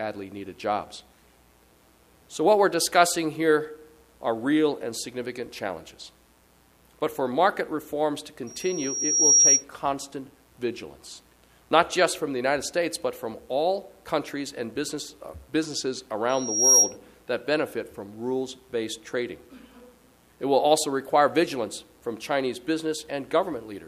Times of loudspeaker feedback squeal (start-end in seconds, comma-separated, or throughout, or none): 8.47-9.64, 16.29-16.97